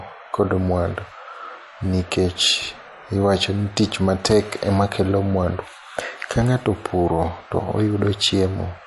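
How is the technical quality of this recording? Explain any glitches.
The recording is clearly degraded, with two faults. Throughout, the speech sounds watery and swirly and has no treble above 11.3 kHz; this is likely MP3 compression at a low bitrate, around 48 kbps. On a spectrogram it shows as a hard ceiling with flickering, patchy upper bands. From 4.21 to 4.32 s there is loose connector crackle: a dirty contact briefly makes and breaks, chopping the signal into an irregular scratchy burst. It appears as jagged spikes on the waveform and broadband vertical streaks on the spectrogram.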